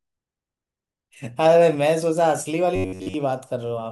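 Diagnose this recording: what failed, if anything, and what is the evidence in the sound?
Something goes wrong at the driver or buffer stage. From 2.76 to 3.14 s the speech collapses into a stiff, metallic drone pinned at about 94 Hz, tracking the words only loosely: classic robotic sound from repeated short buffers. That pitch points to a chunk of roughly 10.7 ms being looped, and for most of that stretch you're hearing repeats rather than fresh audio. The likely cause is input arriving too slowly, so the software keeps recycling its last buffer while real samples are dropped.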